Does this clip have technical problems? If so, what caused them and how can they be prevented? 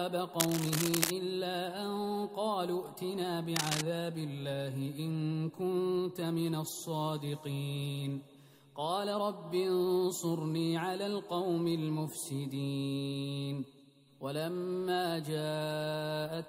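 Yes. Cable scratch noise appears from 0.40 to 1.10 s and again from 3.56 to 3.81 s: dense, ragged crackle at roughly the level of the sound itself, likely from a worn cable or connector whose contact resistance fluctuated as it moved. Replacing or securing the cable prevents it.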